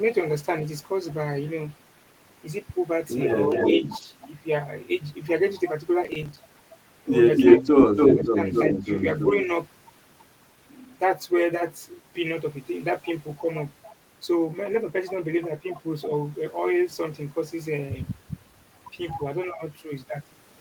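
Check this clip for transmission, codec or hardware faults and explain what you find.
The clip has three kinds of fault: echo leaking back from the far end, the talker being turned down during double talk, and a burst of processor overload crackle.

Echo leak appears at 3.5–3.99 s, 7.36–9.45 s and 13.37–13.94 s. The far side's echo canceller likely failed to remove its loudspeaker pickup, so a copy of the sound returns about 283 ms late in the first two events and about 324 ms late in the third. It sits about 5 dB below the direct sound at first, about 5 dB above it in the long middle stretch, and is a faint trace about 25 dB down at the end.

Speech suppressed in double talk occurs at 3.49–4.07 s and 7.6–8.87 s, overlapping the first two echoes. The canceller likely could not tell the local talker from the returning echo and attenuated both. The voice dips by about 5 dB in the first event and by about 10 dB in the second, where it is pulled down for roughly half a second in total.

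Processor overload crackle runs from 6.05 to 6.37 s. The processor missed around ten audio deadlines, with buffers of about 5 ms. Each miss drops out as a short silent hole, and the string of hard-edged gaps is heard as a gritty crackle riding on the sound.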